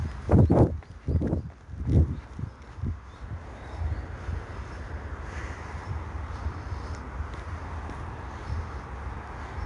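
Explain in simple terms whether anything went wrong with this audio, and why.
4-bit ADPCM compression runs through the whole clip: each sample is squeezed into a tiny guessed step, leaving a gritty hiss on loud sounds, and nothing above 10.7 kHz.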